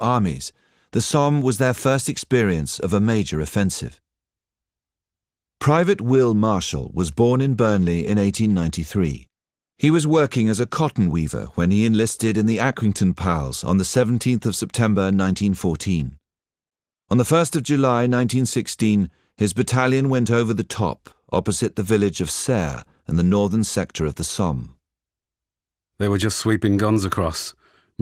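No technical faults are audible.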